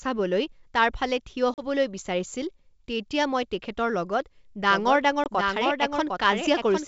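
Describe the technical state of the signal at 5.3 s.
At 5.3 s you're inside a doubled audio track that kicks in abruptly at 4.71 s and runs to the end. A second full-band copy of the speech trails the original by roughly 0.7 s at about 5 dB down, with no reverb or room colour on it. It sounds like two dry copies talking over each other, most likely because the signal was picked up a second time through a slower path.

Right before that moment there's packet loss on an ADPCM call. A 20 ms hole opens at 5.24 s and runs to 5.27 s, which fits a single dropped packet filled with silence. Because the decoder's predictor and step size lost track of the sender's state during the gap, the speech comes back slightly distorted for a few tens of milliseconds before it settles. Underneath, the G.722 wideband coding is clean.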